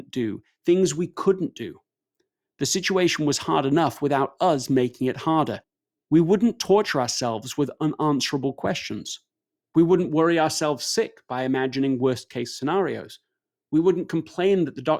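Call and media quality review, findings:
Nothing to flag here; the speech comes through without any audible trouble on the call or media path.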